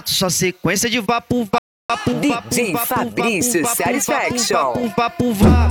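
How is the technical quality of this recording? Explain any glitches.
The recording has one clear glitch. From 1.58 to 1.90 s the sound falls silent, then resumes where it left off. This is a rebuffering stall: the player ran short of downloaded audio and paused for data, adding 313 ms.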